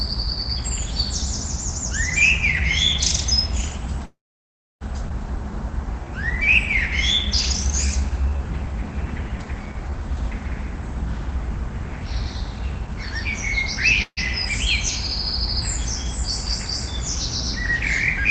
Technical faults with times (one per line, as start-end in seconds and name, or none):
4.05-4.83 call audio freeze
5.09-5.12 skip ahead
5.36-6.43 jitter buffer slow-down
7.87-9.98 jitter buffer slow-down
10.08-13.27 jitter buffer speed-up
14.02-14.19 call audio freeze